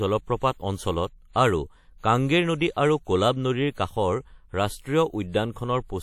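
Across the whole speech clip, a plainly audible coding artefact, likely WMA compression, smears the sound into a ringing, washy texture whose hiss rises and falls with the voice. The long-block transform spreads quantisation noise over tens of milliseconds, and the damage fits a rate of around 48 kbps. A spectrogram shows a hard shelf with nothing above 18.8 kHz, plus blurred, smeared energy around onsets in place of crisp edges.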